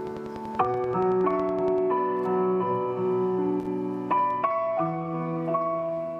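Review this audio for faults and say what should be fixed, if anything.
A train of clicks runs from 0.07 to 1.79 s. About twenty same-shaped ticks arrive at a regular 10.5 per second and peak a few dB above the sound. They likely come from interference or a faulty connection or power supply. The spectrogram shows evenly spaced thin vertical broadband lines, and the waveform shows matching narrow spikes. Shielded, properly grounded cabling and a stable interface kept away from noisy equipment would prevent this.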